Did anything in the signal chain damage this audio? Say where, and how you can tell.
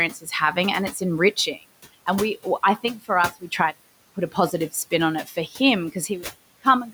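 Yes. Call processing is the damaged stage: a noise suppressor is working throughout the clip, pulling the room noise down by about 17 dB frame by frame. That noise otherwise sits about 19 dB under the speech. On a spectrogram the floor drops away in the gaps and rises again under speech.

The same suppressor also causes speech cut by the noise suppressor. It mistakes weak speech for noise at 0.13–0.32 s, with a drop of up to about 13 dB over roughly a tenth of a second, and at 5.27–5.6 s, with up to about 9 dB over roughly 150 ms. The waveform dips there, and the spectrogram shows that speech turned down with the background.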